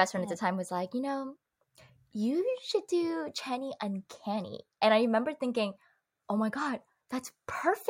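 No technical faults can be heard anywhere in this speech recording. Nothing in the audio breaks, drops out or changes in a way that points to a problem in the chain that carried it.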